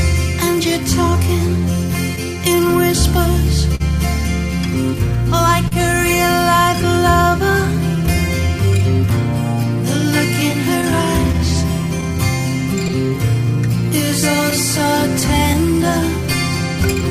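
The sender's audio clock runs slow against the receiver's, by roughly 3 percent, throughout the clip. This clock drift between sender and receiver means audio arrives slightly more slowly than it is played out, so the jitter buffer keeps draining. The receiver has to stretch what it has to keep from running dry, and the result is a faint unevenness in timing rather than one clear event.

That compensation appears as repeated timing corrections from 1.10 s to 15.79 s. The receiver repeatedly extends short pieces so that playback runs at about 99 percent speed, adding roughly a fifth of a second across the stretch. The edits all lengthen the sound but are unevenly spaced. They come through as small hiccups and a tempo that feels very slightly dragged and unsteady.

Twice the buffer actually runs empty because a packet arrives late. At 3.75 s to 3.82 s the receiver holds the last sound for 45 ms until the packet lands, then carries on from the same point with nothing lost. 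A second short stall from a late packet follows at 5.68 s to 5.73 s, filled for 34 ms. Each is heard as a sound hanging on a beat too long, with a slight buzz or dip.

Later, packets go missing or late singly rather than in runs, producing scattered short gaps. Between 10.52 s and 12.91 s there are about five, none longer than about 10 ms and about 50 ms in total, covering roughly 2 percent of that span. From 14.50 s to 15.56 s about four more occur, around 40 ms together and roughly 3 percent of the span. Each hole is bridged by continuing the previous sound, so they register as brief ticks or smears.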